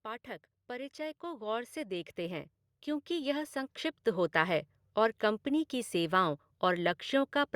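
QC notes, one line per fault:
0.05–2.56 s and 3.07–4.62 s, automatic gain rising: the level control judged the input too quiet and turned its gain up gradually, by about 7 dB over the first span and about 4 dB over the second, so the speech and the background noise floor swell together rather than the talker getting louder. On the waveform the envelope widens as a steady ramp across each span. On the spectrogram every band, noise included, brightens uniformly over the same time.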